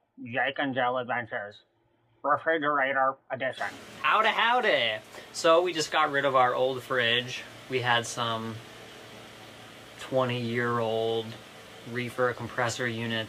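No dropouts, clicks, distortion or level problems turn up anywhere in this recording.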